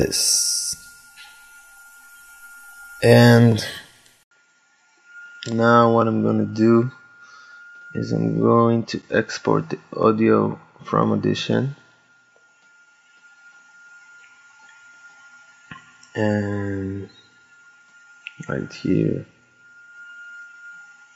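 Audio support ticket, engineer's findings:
Sound goes dull and narrower from 4.23 s to the end, preceded by an 80 ms dropout. Nothing above 7.4 kHz, level drops by about 5 dB, new noise floor sits well below the signal. Likely input switched to a poorer device mid-recording, new mic with its own band, tone and gain.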